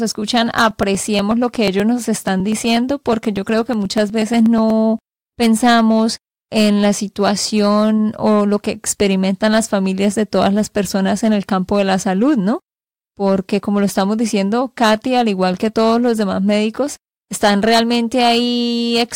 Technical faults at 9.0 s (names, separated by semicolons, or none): hard clipping